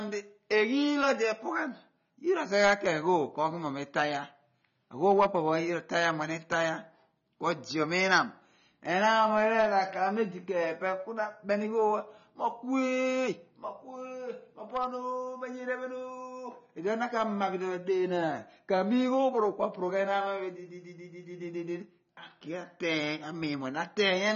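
Throughout, nothing is heard above 6.9 kHz, and the speech sounds dull and smeared. This is likely AAC compression at a low bitrate.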